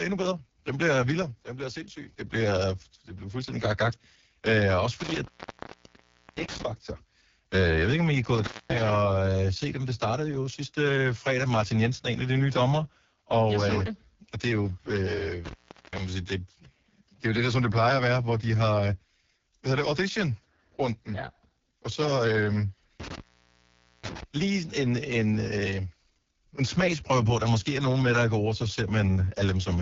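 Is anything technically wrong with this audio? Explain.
Yes. Two faults are audible.

Throughout, the speech goes through the AMR wideband (HD Voice) codec with heavy damage. Nothing is heard above 7.3 kHz. The vocal tract model and pulse coding are starved here, so speech sounds rough and raspy. That fits the lowest 6.6 kbit/s mode.

There is an intermittent contact at 5.00 to 6.63 s, 8.35 to 8.81 s, 15.45 to 15.99 s and 23.00 to 24.23 s. A loose connection opens briefly each time. The sound drops out for about 1.1 s, 0.23 s, 0.42 s and 0.84 s, with crackle at the edges of each gap.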